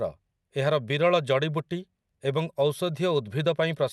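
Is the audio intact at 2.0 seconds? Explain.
Yes, the speech at 2.0 seconds is intact, with no fault at that moment.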